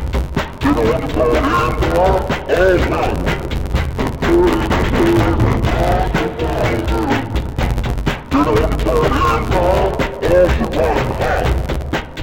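Throughout the clip, interleaved audio is read as planar: each 10.88 ms block of alternating left and right samples is split into halves and played as two slowed channels. With blocks this short, the sound turns dull and robotic, buzzing at about 91.9 Hz.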